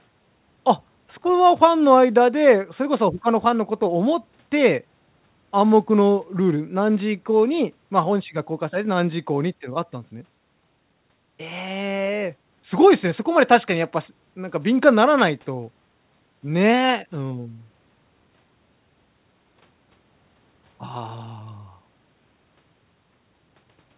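Speech over a call path whose 4 kHz ceiling fits a G.711 A-law codec, with no faults to report.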